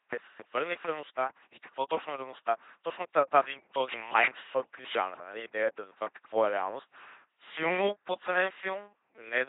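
A speech clip passed through an LPC-10 vocoder for its whole length, heavily damaged by the codec. Each moment is rebuilt as either buzz or noise through a simple vocal tract filter, giving a mechanical robotic voice, with nothing above 3.8 kHz, consistent with a 2.4 kbit/s stream.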